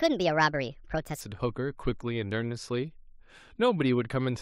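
A speech clip with a wrong sample rate fault from 0.00 to 1.21 s. The voice runs 1.38 times too fast and sits about 5.5 semitones high. Speed and pitch shift together. That fits 32 kHz audio played back at 44.1 kHz without conversion.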